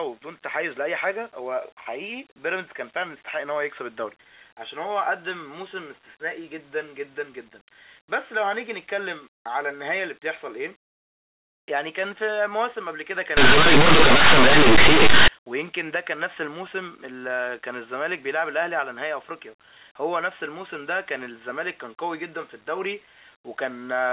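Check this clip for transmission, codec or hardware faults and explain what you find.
One fault stands out. From 13.37 to 15.28 s the speech turns into very loud, harsh distortion, a case of linear audio read as companded. Plain linear 8-bit samples were decoded as mu-law codes, so values just to one side of zero became the loudest outputs while the other side stayed small, wrecking the waveform.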